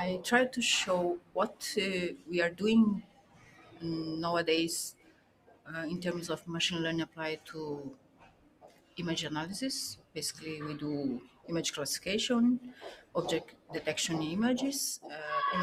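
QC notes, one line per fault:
Throughout: noise suppressor applied to music or sounds, a speech-tuned suppressor treating steady tones and tails as noise, so level swings by around 15 dB and pumps.
1.18–3.83 s, 4.91–5.71 s, 7.05–8.99 s, 9.95–10.44 s, 11.19–12.07 s, 12.63–13.80 s: sound cut by the noise suppressor, held and decaying sound sinking by up to about 17 dB while attacks survive, unlike a dropout.
4.55 s: short concealed packet loss, a 20 ms gap filled by extending the preceding sound, heard as a brief smear rather than silence or a level dip.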